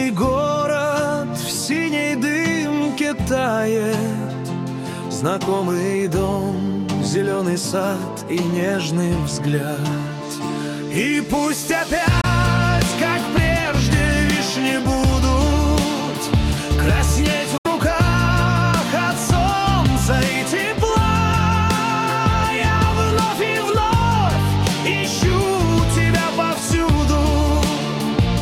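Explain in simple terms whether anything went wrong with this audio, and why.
A Bluetooth dropout likely happened twice: bits of audio didn't reach the headphones in time and were thrown away. The sound cuts to silence from 12.21 to 12.26 s and from 17.57 to 17.67 s, then resumes as if it had kept playing.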